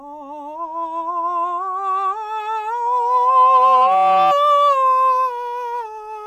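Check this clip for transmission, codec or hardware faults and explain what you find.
One fault stands out in the music: a loudspeaker feedback squeal from 2.86 s to 4.35 s. A microphone is picking up the speaker it drives, and at 757 Hz the loop gain tops unity, so that pitch feeds on itself. A pure tone creeps in and swells over roughly a second until it sits a few dB above the music. Unlike steady interference or mains hum, it grows from nothing at a pitch unrelated to the mains.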